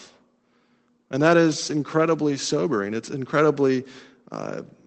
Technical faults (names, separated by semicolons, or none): lost packet rebuilt from error correction; short concealed packet loss